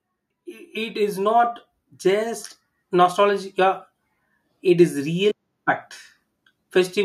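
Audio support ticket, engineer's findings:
Automatic gain rising, 0.44–3.85 s: AGC judged input too quiet and ramped gain up by about 5 dB over roughly 3.4 s; speech and background swell together.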